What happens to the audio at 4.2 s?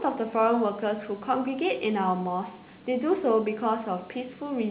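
Nothing goes wrong at 4.2 s: the speech continues intact through that moment, carrying the narrowband call sound with nothing above 4 kHz that fits a 64 kbps G.711 A-law call path.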